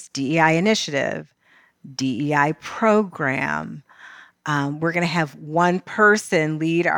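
A few samples have likely gone missing from the speech stream, a loss of only a tiny fraction of a millisecond, at 4.57 s and again at 6.15 s. These dropped samples make the waveform jump abruptly, so each point is heard as a single sharp click.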